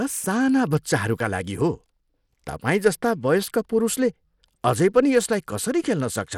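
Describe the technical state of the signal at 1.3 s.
At 1.3 s the speech carries plainly audible codec damage that runs through the whole clip: the treble flickers and thins, with a gritty, grainy noise riding on the sound. This is likely Bluetooth SBC compression at a low bitrate, around 96 kbps, where a small bit pool starves the upper sub-bands and quantises the rest coarsely. On a spectrogram, energy stops dead at about 17.2 kHz, with patchy, blocky gaps below that edge.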